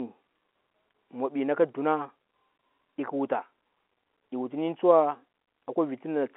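No technical faults are present.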